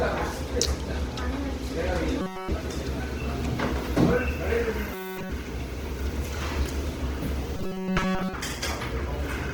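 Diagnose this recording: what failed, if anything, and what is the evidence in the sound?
Robotic sound from repeated short buffers, 2.21–2.51 s, 4.94–5.31 s and 7.57–8.34 s: the sound collapses into a rigid metallic buzz at 188 Hz, with essentially nothing new getting through. This is likely a driver or buffer underrun where a roughly 5.3 ms chunk is replayed in place of skipped audio.

Opus compression, throughout: the sound is grainy and rough rather than swirly, with audible codec damage, yet content still reaches about 20.1 kHz. This is likely a codec-stage fault: full-bandwidth Opus in music mode, starved at a rate that points to roughly 16 kbps, filling bands with folded or noise energy.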